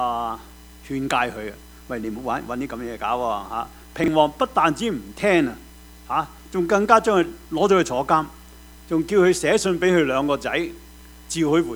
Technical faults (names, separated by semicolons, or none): chunks out of order